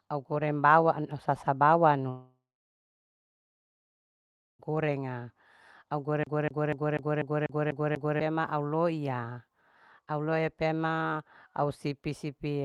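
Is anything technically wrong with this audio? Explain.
Yes, there are two faults.

From 2.09 to 4.69 s the sound stops for about 2.5 s. It briefly continues as a fading tail, then leaves about 2.2 s of silence. A long network dropout is the likely cause.

From 6.23 to 8.20 s, the CD is stuck on one turn. The same 0.25 s segment repeats eight times, each jump marked by a short mute.

The sound is band-limited to about 12 kHz with call-codec texture, which fits Opus at 32 kbps.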